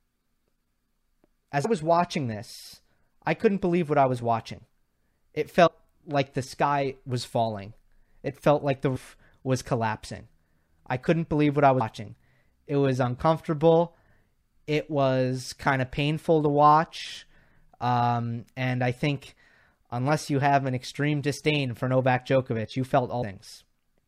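Compressed frames skipped at 1.64 s (before "was watching this I"), 5.66 to 5.68 s (before "like the sky was"), 8.95 s (between "felt like the" and "was collapsing I couldn't"), 11.80 s and 23.21 s. Whole coded blocks never reached the output, so the speech leaps forward by roughly 100 to 300 ms each time, in steps that fit a 26.1 ms frame.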